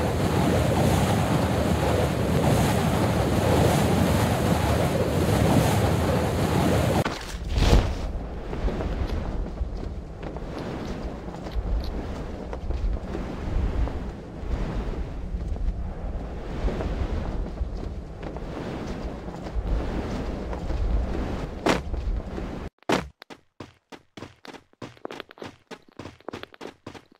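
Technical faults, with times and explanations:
19.68 s onward: doubled audio track, an undecayed full-band copy about 1.5 s behind at near-equal level, starting abruptly, likely from a late second capture.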